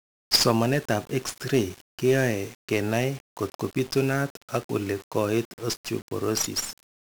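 From start to finish the speech passes through 1-bit DFPWM compression, heavily damaged, at a rate that fits roughly 48 kbps. Each sample keeps only one up-or-down step for a tracking level, so coarse quantisation noise spreads across the band, leaving the speech fuzzy and crackly with its treble sunk in hiss.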